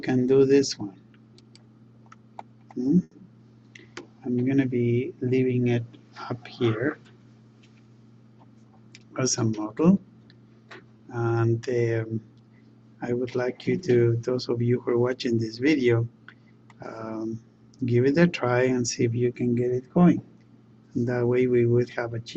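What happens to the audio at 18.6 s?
Nothing goes wrong at 18.6 s; the audio plays through that moment intact, with no dropout, click, distortion or other fault.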